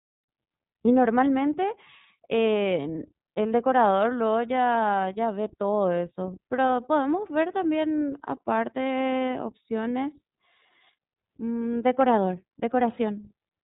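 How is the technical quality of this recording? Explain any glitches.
The technical quality is limited by one fault that runs through the whole recording: narrowband codec coding.

iLBC codec, throughout. The speech sounds as if it passed through this low-rate VoIP codec, and the texture fits its 30 ms frame mode at about 13.33 kbps. Each frame's excitation is coded without reference to the previous one, and everything above 3.8 kHz is removed. The result is plainly audible: the speech stays clear but sounds dull, band-limited, slightly rough and synthetic.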